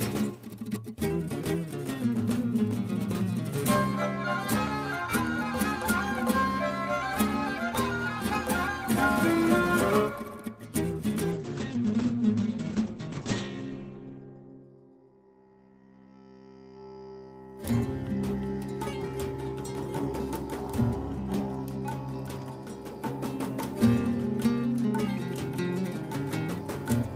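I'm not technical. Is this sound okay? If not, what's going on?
No. From 11.34 to 14.73 seconds the sound turns muffled and rough, losing its crisp top end. This is a call bitrate drop: the connection seemed to weaken, so the call squeezed the audio into far less data until it recovered.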